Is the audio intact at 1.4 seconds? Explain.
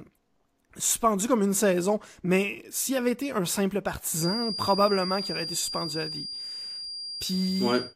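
Yes, at 1.4 seconds the speech plays through cleanly with no audible dropout, click, distortion or other break in the signal.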